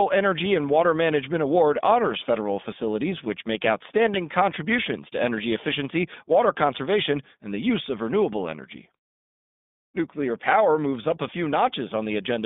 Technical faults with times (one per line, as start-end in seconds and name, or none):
0.00-12.46 iLBC codec